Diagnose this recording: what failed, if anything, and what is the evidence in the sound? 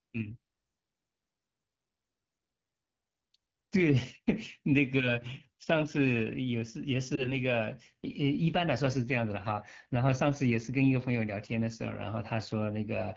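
The codec stage is at fault throughout. The speech has the rough, raspy texture of AMR wideband (HD Voice) coding at one of its two lowest rates, which fits the 8.85 kbit/s mode. Below 6.4 kHz the pulse-driven vocal tract model has too few bits to shape the excitation cleanly. The band above that is filled with shaped noise. Unlike a narrowband codec, the sound still carries air up toward 7 kHz, just coarsely.

A network or radio fault appears at 7.15 to 7.34 s as a brief dip and warble. It sounds like a single lost AMR speech frame. The decoder bridged the gap by reusing the previous pitch and vocal tract settings at reduced gain, then recovered with a moment of weak, rough sound. A packet-loss gap or a dropout would instead leave a hard cut to silence or a click, not this smoothed, pitched smear.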